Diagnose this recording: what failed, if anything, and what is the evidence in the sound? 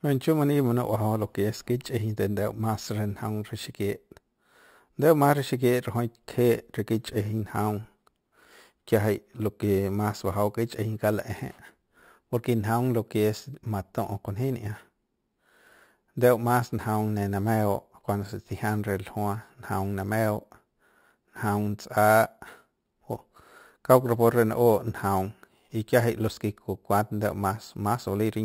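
Imaging from sample-and-hold upsampling at rate conversion: throughout, a metallic fizz about 21 dB down at 6 to 12 kHz rises and falls with the speech, unlike steady hiss. This fits a 12 kHz source.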